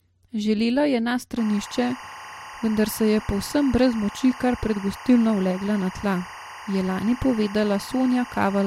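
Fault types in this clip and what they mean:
Timecode bleed: linear timecode leaking from 1.37 s onward, a steady chirping warble near 1 and 2 kHz, about 15 dB under the speech.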